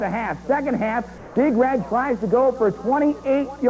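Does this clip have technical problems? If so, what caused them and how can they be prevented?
Yes. The sender's activity detector likely judged the quiet stretch from 1.18 to 1.36 s to be silence and stopped transmitting, so the receiver filled those 180 ms with synthetic comfort noise in place of the background. The real background, sitting about 21 dB below the loud parts, gives way to a flat, detail-free hiss about 2 dB quieter, then returns when the signal resumes. The audio carries nothing above 8 kHz, which fits a wideband call codec such as G.722. To prevent the comfort noise, disable discontinuous transmission on the sender or raise the detector's sensitivity.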